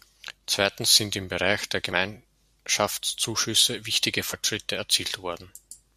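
Damaged data in a compressed stream at 4.32 s in this speech recording causes a brief glitch: corrupted bytes make the decoder misread a frame and lose sync before locking back on.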